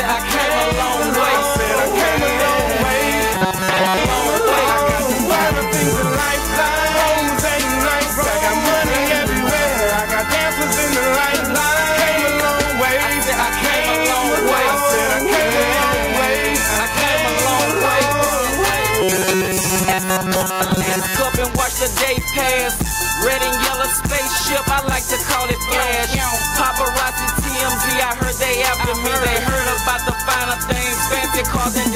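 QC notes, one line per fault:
Throughout, gain pumping: level swings by around 5 dB, ducking under loud sounds and recovering between them, likely from a fast limiter or compressor acting on excessive gain.
3.34–3.97 s and 19.02–21.16 s, robotic sound from repeated short buffers: a rigid metallic buzz at 188 Hz, likely from repeating a 5.3 ms buffer; most of the audio is replaced by repeats.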